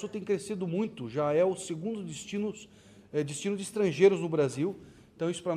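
No technical faults are audible.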